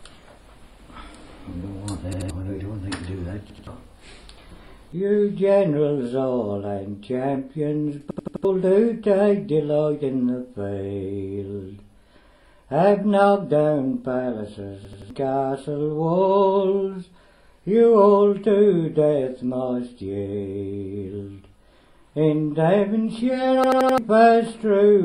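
Repeated buffer stutters at 2.13, 3.50, 8.11, 14.85 and 23.64 s. Audio arrived late, so the same 85 ms chunk (fits a 4096-sample buffer) loops two to four times with hard joins, skipping a fraction of a second of sound.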